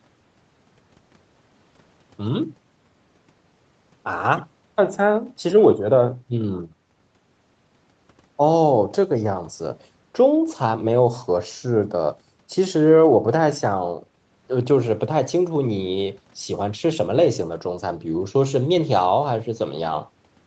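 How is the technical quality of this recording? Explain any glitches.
No glitches are audible in the speech; content stops at 8 kHz, consistent with a wideband Opus call path, and the lowest bass is trimmed by the call microphone processing, both normal for a call.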